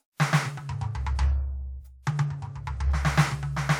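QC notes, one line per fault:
1.79–1.82 s: compressed frames skipped. The music jumps ahead roughly 0.2 s, a few whole frames, which fits a 46.4 ms frame length.
2.86–2.89 s: compressed frames skipped. Another forward jump of about 0.2 s, several frames gone, again consistent with 46.4 ms frames.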